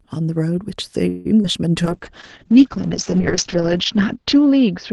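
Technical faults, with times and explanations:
1.09–1.27 s, call audio freeze: the last sound stretches into a fading buzz for about 157 ms, likely a late-packet stall emptying the jitter buffer, with nothing lost afterward.
1.43–1.46 s, short concealed packet loss: about 40 ms of audio never arrives, so the decoder briefly extends the preceding sound, leaving a quick smear as it rejoins, roughly 30 ms earlier.
1.85 s to end, call bitrate drop: Opus falls from 48 to 7 kbps and its bandwidth narrows from 12 kHz to 8 kHz, so the sound turns muffled and rough, bottoming out for 1.68 s.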